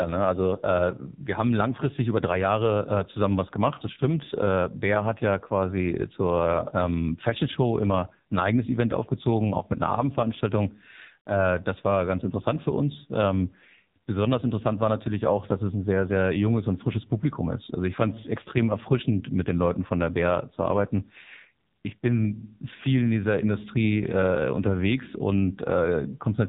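From start to finish the speech has been through the AMR narrowband mobile codec, and heavily so. Nothing survives above about 3.8 kHz, which fits 8 kHz mobile sampling, and the voice comes out buzzy and synthetic, as the codec rebuilds it from a vocal-tract model and a few pulses in each 5 ms. The harshness points to a low rate near 5.9 kbps. Plain band-limiting would be dull but still natural; this is a modelled, mechanical tone.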